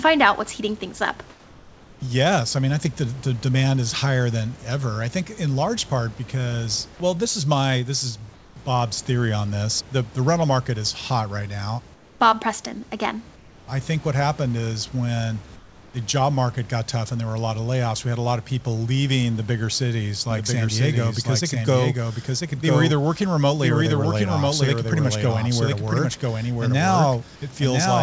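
At 1.30 to 2.02 s, 8.34 to 8.56 s (after "is my this is"), 11.94 to 12.20 s, 13.36 to 13.68 s (before "I think what happened") and 15.56 to 15.94 s, comfort noise replaces the background. These are likely discontinuous-transmission pauses filled with synthetic noise. The room hiss gives way to a flat, featureless hiss about 3 to 4 dB quieter. Unlike a gate or dropout, the pause never falls silent.

From 20.31 s, just after "leaving the bigger cities", to the end, the speech is a doubled audio track. It likely comes from a second, slower capture path. A full-band copy about 5 dB down trails by roughly one second. Unlike an echo or reverb, it has no decay or room colouring.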